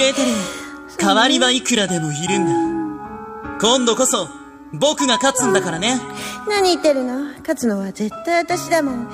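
Nothing here calls for comment, as no technical faults turn up anywhere in the audio.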